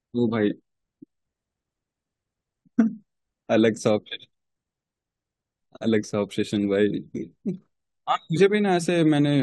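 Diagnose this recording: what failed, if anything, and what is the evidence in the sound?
Nothing in the recording points to a failure at any stage of the chain: the speech signal holds steady throughout, with no dropouts, discontinuities or level disturbances to trace back to wiring, conversion, buffering, processing, transport or playback.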